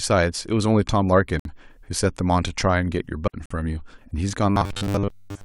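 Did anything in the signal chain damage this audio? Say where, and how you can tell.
Yes. At the network and playback stage, segment timestamps leave gaps, so the player inserts silence: hard-edged holes at 1.40 to 1.45 s (about 57 ms) and 3.46 to 3.51 s (48 ms). Both fall near 2-second segment boundaries, and no speech is lost.

A digital wireless dropout occurs at 3.28 s. The link lost too much data and the receiver muted for 60 ms with a very short fade. The result is a clean, near-silent hole with no noise burst on either side.

From 4.50 s to the end, the speech turns into a rigid metallic buzz at 100 Hz that still loosely tracks the words. This is robotic sound from repeated short buffers, likely from audio arriving too seldom at the driver or buffer stage. A 10 ms stretch is looped while most of the real audio is skipped.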